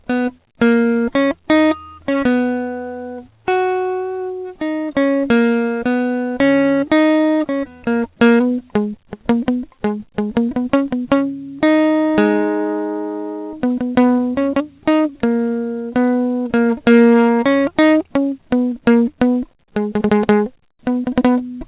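Nothing goes wrong anywhere in this music, which simply comes through a call connection with everything above 4 kHz gone, as you'd expect from a 64 kbps G.711 A-law codec.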